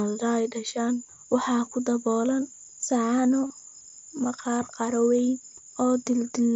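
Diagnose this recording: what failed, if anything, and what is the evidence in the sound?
Just after "ku daboolan saxanno", from 3.47 to 3.50 s, the speech turns into a short, buzzy tone held at full level for 30 ms, with a slight warble as the real signal returns. This is concealed Bluetooth headset packet loss on the wireless link. Consecutive voice packets from headset to phone were lost, which fits a run of about four, and the receiver filled the 30 ms gap by repeating the best-matching piece of the preceding 20 ms or so, carried through the mSBC wideband headset codec.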